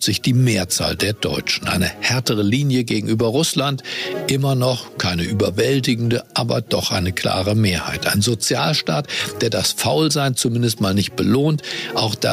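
Gain pumping runs through the whole recording: the gain ducks by around 10 dB under each loud sound, so loud and soft passages sit unnaturally close in level and the audio sounds squashed. The likely cause is input gain set far too high, with a fast limiter or compressor clamping down on every peak. On a waveform the envelope looks flattened.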